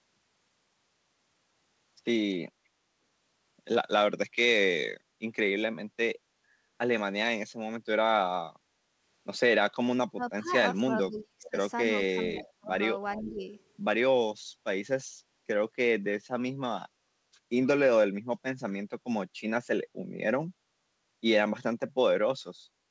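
Speech carried over a call link, with nothing above 8 kHz, which fits a G.722 stream at 64 kbps. The room sound behind the talker sinks briefly at 5.0 to 5.19 s and again at 8.63 to 8.94 s, by about 7 dB and about 6 dB. This is background gated by the echo canceller, which pulled the microphone down while the loudspeaker was active. The talker's own voice then dips sharply and breaks up. Between 10.14 and 11.57 s around a second is cut hard, by something like 30 dB. Shorter, shallower losses follow at 12.07 to 12.72 s and 13.22 to 13.46 s. This is likely speech suppressed in double talk, with the canceller unable to separate the talker from the far side and attenuating both. Faint delayed copies of the voice also come back, trailing the original by 417 ms. The first is a barely audible scrap at 10.47 to 10.52 s. The second, at 13.16 to 13.41 s, sits around 20 dB below the speech. They point to an echo leak, most likely from a loudspeaker-playing endpoint whose canceller let part of its microphone pickup return.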